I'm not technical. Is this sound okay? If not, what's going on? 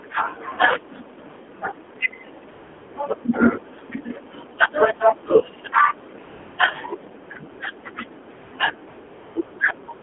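No. AMR narrowband mobile codec, throughout: the phone squeezes the speech into a narrow band and rebuilds it from a rough model, so it sounds thin, buzzy and synthetic.

AMR comfort noise, nine times between 2.5 s and the end: the phone decided nobody was talking and stopped sending speech, so smooth fake hiss fills gaps lasting from 0.02 to 0.48 s.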